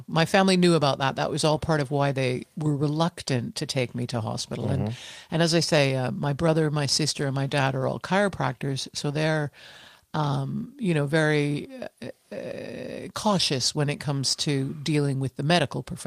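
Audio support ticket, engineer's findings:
Speech signal checked across its full duration with no technical faults found and nothing to attribute to any component.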